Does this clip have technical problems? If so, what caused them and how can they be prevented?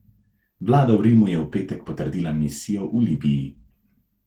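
Yes. Throughout the clip, the speech has passed through Opus voice compression at a low bitrate, which fits roughly 16 kbps. It runs in hybrid mode: a SILK linear-prediction layer codes the band below 8 kHz and a CELT layer adds the full band above it. With so few bits, the excitation signal driving the predictor is quantised coarsely, so the speech comes out plainly hoarse and slightly robotic. To prevent this, encode at a higher Opus bitrate, for example 32 kbps or more for speech.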